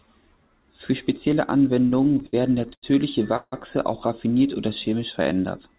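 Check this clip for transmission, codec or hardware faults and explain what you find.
Three network-timing faults appear in this speech, all over a narrow call path with nothing above 4 kHz, which fits G.711 A-law at 64 kbps.

From 1.9 to 2.85 s there are repeated stalls (stutter). Seven short gaps, up to 89 ms, occur where the buffer ran dry. The receiver stretched the last sound, so the speech drags and stutters.

From 3.37 to 3.54 s, just before "auch raffiniert oder", comes a call audio freeze, likely from delayed packets. About 156 ms is filled with a fading buzz or hiss ending in brief silence.

From 4.67 to 5.34 s, after "auch raffiniert oder", a jitter buffer slow-down repeats pitch periods. That adds 59 ms, and speech runs at 93% speed with the same pitch.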